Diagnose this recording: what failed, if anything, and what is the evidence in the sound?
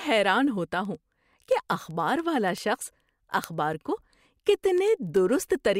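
A digital interface clocking failure: the receiving device was running on its own clock rather than locking to the sender's, so the two drifted apart at roughly 200 ppm. This produces word clock ticks through the speech, sharp clicks of uneven strength at a steady rate of about ten per second, from 0.18 s to 5.74 s, around fifty in all. Each tick marks a clock slip, where a few samples are misread and, it seems, a single sample is dropped or repeated.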